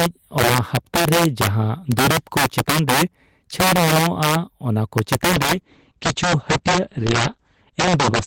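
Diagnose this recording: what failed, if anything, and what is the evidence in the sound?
Integer overflow in the sample-format conversion or gain stage runs through the whole recording. The loudest speech peaks, driven about 8 dB past full scale on a small fraction of samples, wrap to the opposite sign instead of limiting. They produce harsh cracks much sharper than ordinary clipping.

A call bitrate drop starts at 5.33 s and lasts to the end. The network's bandwidth estimate fell, and the encoder went from 32 kbps to 10 kbps. The coarser coding makes the speech sound rough and watery, and the audio bandwidth shrinks from 20 kHz to 8 kHz, so the top end goes dull.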